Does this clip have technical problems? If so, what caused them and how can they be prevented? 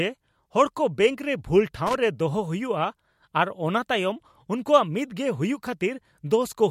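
Yes. A worn or dirty contact in a connector lost and regained contact several times from 1.87 to 1.95 s. This loose connector crackle chopped the speech signal, producing a brief, irregular burst of scratchy crackle lasting about 80 ms. Cleaning or replacing the connector and securing the cable so it cannot move prevents it.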